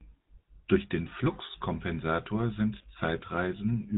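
Buzzy, gravelly speech with nothing above 4 kHz runs through the whole clip: plainly audible GSM full-rate codec damage. The codec rebuilds the voice from a vocal-tract model driven by coarse, regularly spaced pulses, which fits a 13 kbps full-rate mobile link.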